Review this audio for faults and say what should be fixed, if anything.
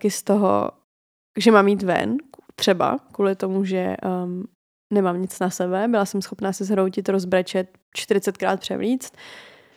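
Nothing to fix; no faults are audible anywhere in this speech recording.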